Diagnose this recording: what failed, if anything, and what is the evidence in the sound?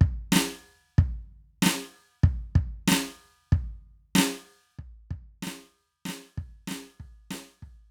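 At 4.78 s the music drops abruptly by about 14 dB and stays down to the end, with the background falling in step. This sudden gain jump is likely a digital gain change in the processing chain, applied between two samples with no ramp.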